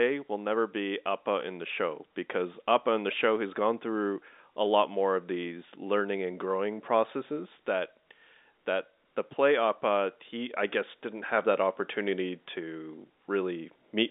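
No faults can be heard in this speech clip at any point. It comes through G.711 telephone coding, so the band is held to the narrow telephone range of roughly 250 Hz to 3.7 kHz, with the coding leaving little or no audible damage.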